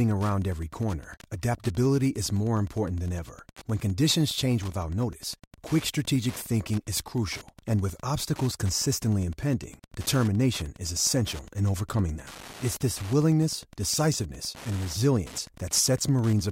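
A steady, faint ticking runs under the speech from start to finish, repeating about ten times a second and sitting well below the talker's level. It is Wi-Fi interference: a nearby Wi-Fi radio sends a beacon every 102.4 ms, and some part of the audio circuit is close enough to pick up that radio-frequency burst and rectify it into the audio band, so each beacon lands as a small click at that fixed rate.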